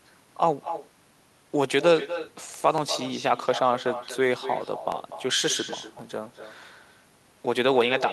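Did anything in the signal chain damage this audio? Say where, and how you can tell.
Yes. Echo with no canceller enters at the call-processing stage. Each phrase returns about 11 dB down after roughly a fifth of a second, thinner. A spectrogram shows faint, delayed duplicates of every harmonic stack, and the waveform shows trailing ghost envelopes.

Clock drift buffer slips occur at the driver or buffer stage. Regular clicks repeat every 1.07 s from 0.64 s to 7.07 s, most likely from two clocks that disagree by several hundred parts per million, dropping or repeating a few tens of samples each time. They appear as thin vertical broadband lines and waveform discontinuities.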